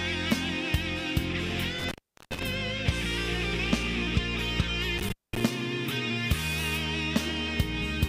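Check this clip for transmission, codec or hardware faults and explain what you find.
There's an intermittent contact fault here, turning up twice. The first runs from about 1.79 to 2.43 s, with the line fully open for around 397 ms. The second sits between 4.98 and 5.46 s, open for roughly 211 ms. Something in the chain, most plausibly a loose plug or cable, briefly loses its connection, so the audio drops out abruptly. You get a crackle as the contact breaks and again as it makes, with faint hiss in the gap between.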